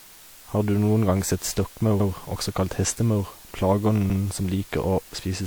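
Throughout the clip, the speech has been reduced to low bit depth with dither. The hiss level points to about 7 bits, with dither added before rounding, so the quantisation error becomes a steady, even white hiss about 25 dB below the signal, without any gritty distortion.

At 2.0 s, just after "gang sett" and before "også kalt hestemaur", overlapping chunks appear: each 2-second chunk began 100 ms before the previous one ended, so that 100 ms plays twice, heard as a brief stutter. The same repeat recurs at 4.1 s.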